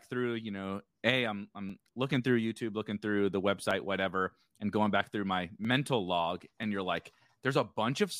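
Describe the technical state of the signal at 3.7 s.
At 3.71 s, between "looking through the" and "whatever and going back", the stream has likely lost well under a millisecond of audio (dropped samples). The waveform jumps abruptly to a later value, which is heard as one sharp click.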